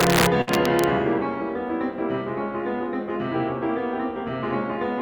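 From the opening, about 0.01 s, until 0.84 s, the loud peaks of the music break into violent cracks far harsher than clipping. This is integer overflow: the level is overdriven by about 5 dB, and instead of being limited, each peak wraps to the opposite sign across the full range.

Inside that stretch, from 0.41 s to 0.49 s, the music stalls into a held, fading continuation of its last sound for about 56 ms, then jumps ahead. A burst of packet loss caused this: about 60 ms of audio never arrived in time, so the receiver stretched out what it had and resumed later, skipping the missing part.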